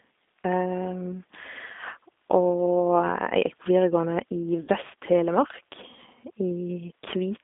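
G.729 codec damage runs throughout the speech. The codec rebuilds each 10 ms frame from a vocal tract filter, a pitch predictor and a few pulses at about 8 kbit/s, so the voice sounds rough and synthetic, confined to roughly 250 Hz to 3.6 kHz.

VoIP packet loss concealed by the speech codec occurs from 4.61 to 4.69 s. About 70 ms of audio went missing, which fits seven lost 10 ms frames. The decoder stretched its last pitch and filter into a fading buzzy tone or coloured noise, and the rebuilt speech stays weak briefly afterwards.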